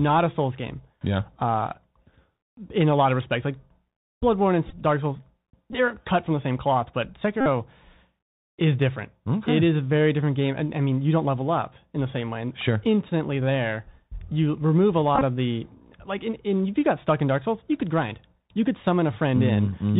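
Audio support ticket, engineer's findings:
Bluetooth CVSD headset codec, entire clip: speech band-limited, nothing above 4 kHz. Sibilants scratchy, loud bright passages distorting, granular hiss under the speech. Probable component: headset voice link running CVSD, consistent with 64 kbit/s one-bit delta modulation whose adaptive step cannot keep pace with fast high-frequency swings.

Bluetooth headset packet repeated, five events. Probable component: headset-to-phone radio link dropping voice packets, decoder replaying the previous packet's bits.
4.67 to 4.73 s: 30 ms lost, scattered over 45 ms, longest run about 10 ms, short buzzy bursts.
5.73 to 5.75 s: 15 ms lost, brief buzz.
7.41 to 7.46 s: 52.5 ms continuous, steady buzz near 267 Hz, fits repeats every 3.75 ms.
13.1 s: 11.2 ms lost, brief buzz.
15.15 to 15.23 s: 45 ms lost across 67.5 ms, longest run about 20 ms, intermittent buzz.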